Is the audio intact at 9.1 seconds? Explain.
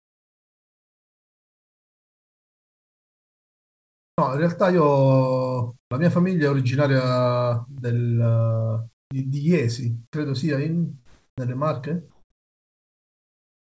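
No, not quite. From 8.93 to 9.11 s there's comfort noise in place of the background. For about 180 ms the real room sound drops out and is replaced by a flat, featureless hiss roughly 43 dB lower. The likely cause is discontinuous transmission: the sender's voice detector decided nothing was worth sending, so the receiver invented noise to fill the gap.

Right at 9.05 to 9.11 s you also get an onset clipped by the voice detector. The first 60 ms of the returning speech is missing, so it kicks in abruptly with no soft lead-in. That's likely the detector being slow to wake up, leaving comfort noise sitting where the start of the sound should be. Throughout, nothing comes through above 8 kHz, which fits a G.722 call path.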